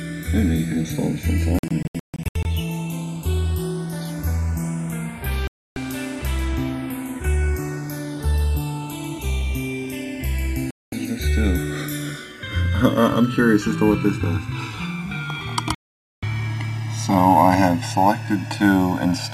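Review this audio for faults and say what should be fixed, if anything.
Digital broadcast dropouts mute the sound four times: 1.59–2.46 s, as several short holes totalling about 0.46 s with the longest 144 ms; 5.47–5.77 s; 10.71–10.93 s; and 15.75–16.23 s. Each time the receiver lost the signal or rejected corrupted frames and muted until clean frames arrived, so that material is gone. The waveform shows silent gaps with abrupt edges, and a spectrogram shows full-height blank columns. Gap lengths fit 24 ms frames. Improving reception or signal margin would prevent them.

Channels drifting apart is heard throughout as a slow flanging sweep when the channels are summed to mono. The two channels were captured on separately clocked devices, mismatched by something like 100 ppm, so the offset between them creeps to roughly a millisecond and a half by the end. On a spectrogram of the mono sum, comb notches glide steadily downward as the delay grows. 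Locking both devices to a single word clock would prevent this.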